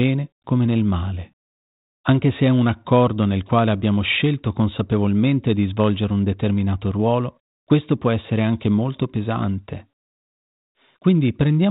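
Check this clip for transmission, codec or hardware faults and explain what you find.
No faults turn up anywhere in this clip.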